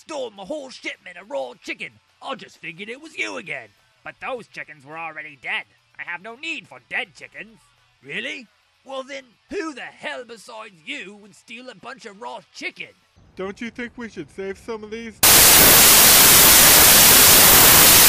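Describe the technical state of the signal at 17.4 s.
At 17.4 s the signal has a wrong sample width fault, running from 15.23 s to the end. It sounds like packed 24-bit data read as 32-bit. Loud noise buries the sound, which plays 1.33 times too fast and too high.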